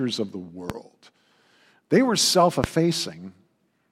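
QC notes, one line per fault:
0.70–0.73 s and 2.64–2.67 s, loud pop: a sudden voltage step, likely from a plug, switch, static or driver glitch, is added to the signal. It gives a single sharp pop after "of the" and after "were self", about 15 dB then about 20 dB above the speech, which carries on underneath.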